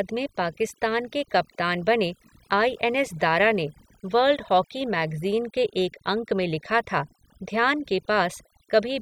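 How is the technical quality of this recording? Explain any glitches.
The recording suffers from overdone noise removal, present for the whole clip rather than at any single moment. A noise reducer set too aggressively has pushed individual frequency bands down or off wherever they sat close to its noise estimate, taking softer parts of the speech along with the noise. Between phrases the background collapses into near silence dotted with twinkling specks. On a spectrogram this appears as a patchy, holed texture with isolated bright dots in the gaps.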